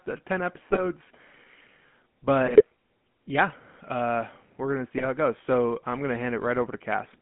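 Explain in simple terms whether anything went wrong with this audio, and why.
Two problems can be heard, one lasting the whole clip and one appearing in short bursts.

The entire recording has passed through the GSM full-rate codec, the original digital mobile phone speech format. It doesn't store the actual sound wave. It stores a simple model of the voice and drives it with a coarse, regularly spaced pulse signal. That gives the speech a clearly audible buzzy, gravelly edge. The sound is also confined to a phone-line band of roughly 150 Hz to 3.4 kHz, so it sounds thin and boxy.

On top of that, there are three short bursts of GSM bit errors, where corrupted data reached the decoder: 0.70 to 0.82 s, 2.46 to 2.63 s, and 4.97 to 5.07 s. The last one falls between "we're going to see" and "it goes". Each burst lasts about a tenth of a second or a little more. During it, the decoder rebuilds the voice from damaged settings for its tone, pitch and loudness, so the speech briefly turns into squawks, pops or gargling before it recovers.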